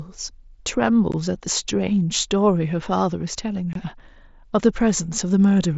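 At 1.12 s and from 3.73 to 3.76 s, unconcealed Bluetooth headset packet loss drops 15 ms, then 22.5 ms, to abrupt-edged holes over the mSBC link, rather than filling the gaps with concealment.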